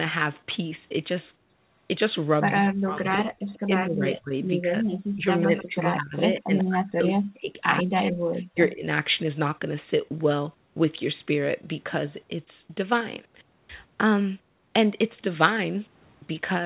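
From about 2.58 to 8.85 s the talker keeps ducking in and out, with roughly four seconds of that stretch pulled down, at worst by something like 40 dB, so parts of the sound nearly vanish. That's speech suppressed in double talk: the likely story is that the far end was talking at the same time, and the echo canceller couldn't tell the local voice from its own loudspeaker echo, so it squashed both.

Inside that same window there are short echo leaks: 3.49–3.59 s, 5.58–5.63 s, 6.58–6.64 s and 7.79–7.83 s. Each is a ghost of the voice trailing by about 135 ms (closer to 123 ms on the last one). They get louder as they go, from about 30 dB under the speech on the first, to about 20 dB on the middle two, to only about 10 dB down on the last. They likely come from loudspeaker pickup that the canceller didn't fully remove. All of this sits in audio capped at 4 kHz, which fits a G.711 narrowband call path.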